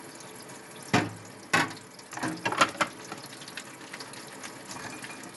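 No technical faults can be heard at any point in this recording of sounds.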